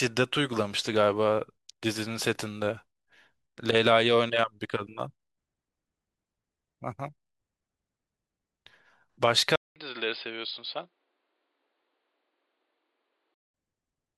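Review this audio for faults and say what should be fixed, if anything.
At 9.56 s the speech drops out for about 200 ms, then comes back duller and quieter, with nothing above 5 kHz and faint new background noise, until 13.54 s. That's likely the input switching to a poorer device. Lock the input device before recording.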